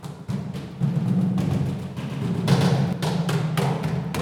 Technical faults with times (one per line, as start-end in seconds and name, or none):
0.91-2.93 doubled audio track